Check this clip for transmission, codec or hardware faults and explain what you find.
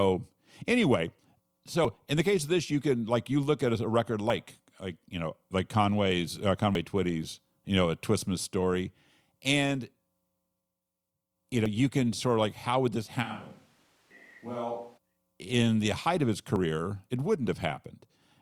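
Two faults can be heard: a dropout where audio is missing between chunks, and a brief switch to a distant microphone.

At 6.75 s there is a single skip in the speech. This is likely audio missing between chunks: a processor working in 2.5-second blocks lost a sliver, around 50 ms, at the handover from one block to the next. The audio on either side is butted together with no gap of silence, so the speech jumps forward abruptly instead of pausing.

From 13.25 s to 14.96 s, between "like how would this" and "in the height of", the close microphone's signal drops out and the recording falls back to a microphone much further from the talker, likely a camera or room mic. The speech suddenly sounds hollow and roomy, loses low end, drops by about 10 dB, and carries background noise roughly 30 dB under the speech. Both the switch in and the return are instant.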